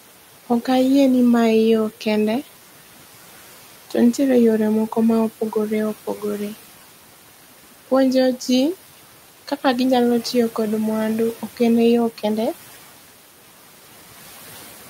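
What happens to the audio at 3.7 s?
At 3.7 s, as throughout the clip, noise suppressor artifacts are present. The suppressor pulls steady-noise bands down by about 12 dB frame by frame, so the room noise, about 18 dB below the speech, dips in pauses and swells under speech.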